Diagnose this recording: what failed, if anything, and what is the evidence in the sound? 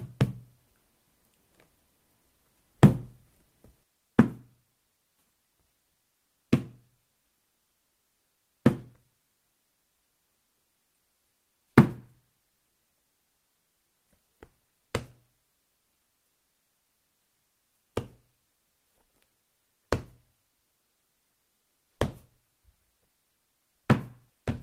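Nothing failed at any stage: the sounds in this recording reach the listener as an unbroken, steady signal, with nothing in the audio pointing to trouble in the wiring, conversion, buffering, transmission, storage or playback path.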